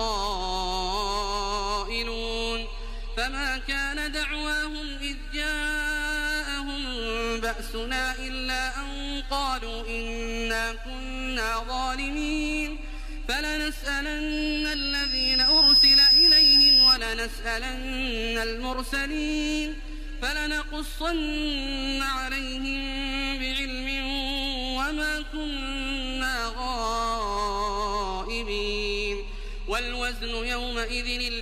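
At 14.31 s a single high, piercing tone near 5.1 kHz appears and swells over about a second and a half into a squeal that ends up roughly ten decibels louder than the rest of the sound, lasting until 16.99 s. This is loudspeaker feedback squeal: a microphone was picking up the loudspeaker it was feeding, and at that one frequency the loop gain passed unity, so the tone kept reinforcing itself until it stopped at 16.99 s.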